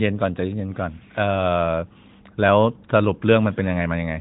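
No technical faults occur anywhere in this speech, which comes through the AMR narrowband mobile codec with nothing above 3.8 kHz.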